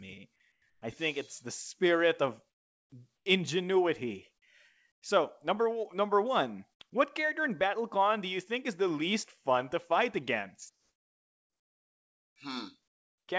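Speech over what sounds like a G.722 call (nothing above 8 kHz), with comfort noise in place of the background at: 0.52, 0.70 (both before "I think it's the"), 2.50, 3.16, 4.92, 10.70 to 12.36 (after "least fun to fight") and 12.88 s. The real room tone becomes smoother noise of a different tone, mostly quieter by about 4 to 20 dB, likely from discontinuous transmission with RFC 3389 comfort noise.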